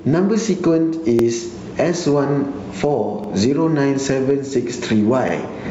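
From the start the level breathes, swinging something like 15 dB. That's gain pumping, likely a gain set way too hot with a fast limiter clamping down on the peaks, so everything sounds squashed.

At 1.19 to 1.24 s, 3.24 to 3.29 s and 5.29 to 5.34 s there's a little stutter where roughly 48 ms plays twice. Those are overlapping chunks: the audio's cut into 2 s pieces, each starting a touch before the previous one ends. Under all this, the top end stops at 8 kHz, which fits a G.722 call path.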